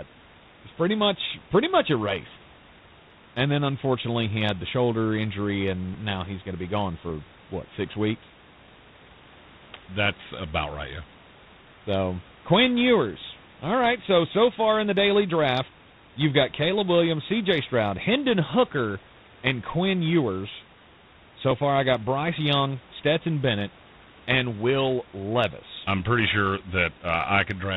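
Speech throughout all 27.8 seconds carries plainly audible G.726 ADPCM damage: a harsh, rasping hiss that rises and falls with the speech level, and nothing above 4 kHz, which fits the 24 kbit/s mode coding only three bits per sample of prediction error. Room noise sits about 25 dB below the speech.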